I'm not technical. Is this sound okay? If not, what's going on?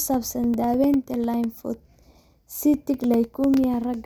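No. From 0.14 s to 3.94 s the speech is broken by periodic USB or driver dropouts: every 0.1 s a tiny slice, around two milliseconds, drops to silence. Repeated about forty times, these gaps make a steady ticking under the speech, ten per second.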